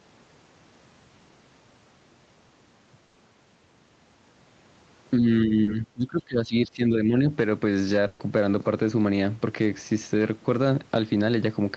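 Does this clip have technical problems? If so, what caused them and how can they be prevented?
Yes. The audio shows three kinds of fault.

Burst of packet loss, at 3.07 to 3.18 s and again at 8.07 to 8.22 s: a run of packets was lost or arrived too late. The receiver kept the last sound going and faded it, about 80 ms in the first gap and 120 ms in the second, so the sound turns into a held buzz or fading hiss before picking up further on with that stretch missing. A network with less congestion, or a larger jitter buffer and forward error correction, would prevent this.

Speech suppressed in double talk, from 5.18 to 7.15 s: with both sides likely talking at once, the echo canceller could not tell this talker apart from the loudspeaker echo and turned everything down. The voice dips by roughly 20 dB at worst and thins or drops out in pieces, adding up to around a second and a half within that span. 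Using a headset, or an echo canceller with better double-talk detection, would prevent this.

Short concealed packet loss, at 5.63 to 5.70 s: about 40 ms never reached the decoder in time, and the receiver patched the hole by extending the preceding sound before blending back into the real signal. It comes across as a brief smear or wobble, landing inside the suppressed stretch. A steadier connection or a little more jitter-buffer headroom would prevent this.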